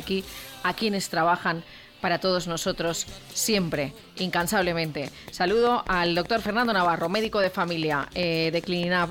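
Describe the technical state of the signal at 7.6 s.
At 7.6 s a steady ticking sits on top of the sound: sharp, same-shaped pops arriving evenly at about 5 per second, each standing a few decibels above the programme level. This train of clicks runs from 5.08 s to 9.05 s, some twenty pulses in all. The regular spacing points to an outside pulse source, likely electrical interference from nearby equipment or a faulty connection or power supply injecting a repeating glitch into the signal.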